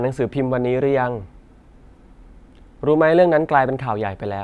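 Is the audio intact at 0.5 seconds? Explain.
Yes, at 0.5 seconds the speech plays through intact, with no dropout, glitch or other fault at that moment.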